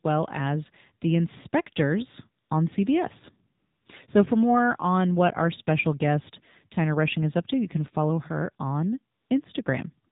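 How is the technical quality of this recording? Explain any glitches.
The recording has poor technical quality. It carries mobile-phone speech coding throughout, plus three short comfort-noise gaps.

The AMR narrowband mobile codec is present for the whole clip. The speech is squeezed through a low-rate vocal-tract model, and the buzzy, synthetic texture and plainly audible coding damage fit a low AMR-NB mode around 7.4 kbps. Everything above 4 kHz is gone, so the voice sounds thin and boxed-in. On a spectrogram this appears as a hard ceiling at 4 kHz with empty space above it and smeared, grainy harmonics below.

AMR comfort noise appears at 2.44 to 2.50 s (60 ms), 3.58 to 3.86 s (280 ms), and 9.16 to 9.30 s (140 ms), the last right after "can follow her on". At these points the phone stopped sending speech frames and the receiver filled the pause with synthetic noise built from a rough level and spectrum. 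The real background is replaced by a flat, smooth hiss that switches in and out abruptly. On the waveform these stretches are uniform low-level blocks with sharp edges. On a spectrogram they are featureless, evenly shaded bands.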